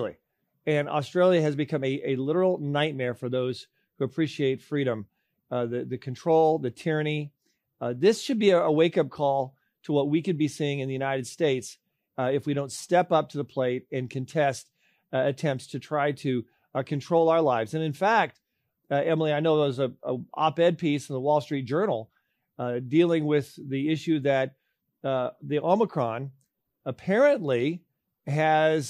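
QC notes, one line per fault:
No technical faults are audible anywhere in the speech, with the signal holding steady and continuous across the whole recording.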